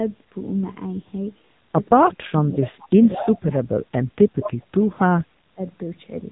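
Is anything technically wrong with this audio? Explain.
Yes. The speech went through an AMR narrowband mobile codec, and there are echo leaks and double-talk suppression.

AMR narrowband mobile codec, throughout: the speech was coded with the 2G/3G mobile codec, which models the vocal tract with sparse pulses and leaves nothing above about 3.8 kHz. The damage is plainly audible. The voice sounds muffled, buzzy and synthetic, which fits a low mode near 7.95 kbps.

Echo leak, 2.6 to 2.88 s, 3.06 to 3.29 s and 4.41 to 4.51 s: the other end's echo canceller likely failed to remove what its microphone picked up from its loudspeaker. A copy of the voice returns about 214 ms late. It sits roughly 15 dB below the speech in the first stretch and about 10 dB below in the later two.

Speech suppressed in double talk, 4.14 to 5.38 s and 5.54 to 5.59 s: with both sides talking, the echo canceller likely could not tell its talker from the echo and turned everything down. 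The voice dips by up to about 30 dB in the first stretch, for around a second in total, then briefly by about 20 dB.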